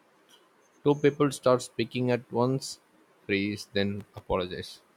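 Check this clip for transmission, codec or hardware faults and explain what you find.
One fault turns up: a burst of processor overload crackle from 3.99 to 4.26 s, just after "speaking at once freeze". For about a quarter of a second the processor could not fill its audio buffers on time. These buffers fit a size under a millisecond, and around thirty deadlines were missed. Each miss was filled with silence, so the speech is chopped into a rapid, gritty tearing. That dense grain distinguishes it from network packet loss, which leaves fewer, longer gaps.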